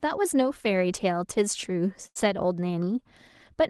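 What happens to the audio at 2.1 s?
At 2.07 s a burst of packet loss interrupts the speech, lasting until about 2.17 s. A run of packets never arrived in time, so the receiver concealed the gap by extending the last decoded sound and fading it down over roughly 78 ms. That produces a brief held, decaying tail rather than clean continuation. When real packets return, playback jumps ahead, and about 80 ms of the original speech is simply absent.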